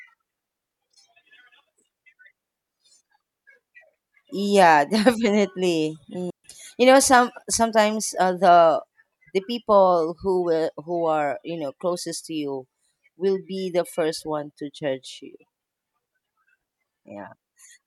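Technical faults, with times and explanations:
6.30 to 6.44 s, digital wireless dropout: the radio link lost too much data for the receiver to conceal, so it muted the speech for about 139 ms, fading in and out very quickly. The result is a clean hole of near silence, with no noise burst on either side.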